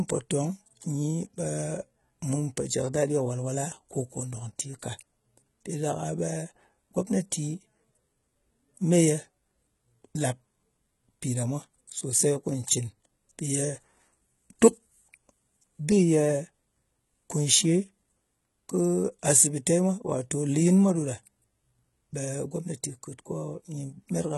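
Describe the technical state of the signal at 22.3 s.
At 22.3 s the speech has the gritty, metallic treble and lispy s sounds you get from heavy HE-AAC compression, likely at a very low bitrate around 16 kbps. It runs the whole clip: the upper band is rebuilt from copied lower bands, with nothing above 11.8 kHz.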